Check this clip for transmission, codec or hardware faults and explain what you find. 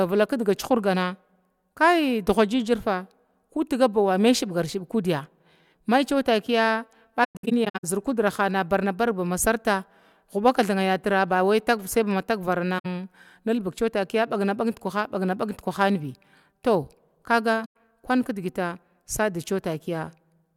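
The speech shows AAC frame loss with muting in three places. Just after "kudya mai cewa takiya", from 7.24 to 7.85 s, about 363 ms of audio drops out in scattered gaps, the longest roughly a tenth of a second. Two shorter gaps follow: 64 ms at 12.78 to 12.86 s, and 107 ms at 17.65 to 17.76 s, just before "kun kidgita". The decoder zeroed the missing frames, and the overlapping windows fade each gap out and back in, leaving soft-edged silent holes.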